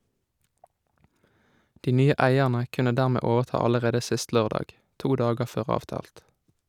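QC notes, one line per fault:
Nothing to flag here; I listened through the speech and didn't hear anything that needs a note.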